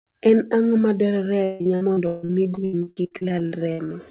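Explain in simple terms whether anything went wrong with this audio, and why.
From 1.44 to 3.92 s the speech turns choppy and robotic: repeated packet loss, about two dozen brief holes patched over, unlike a single dropout.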